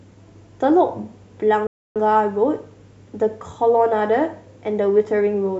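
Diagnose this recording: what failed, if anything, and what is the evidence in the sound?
A playback stall cuts the speech off mid-flow from 1.67 s to 1.96 s, about 0.29 s of silence, before the sound resumes. On a waveform this is a flat line; a spectrogram shows a blank vertical band. The likely cause is the player starving for data or its thread blocking.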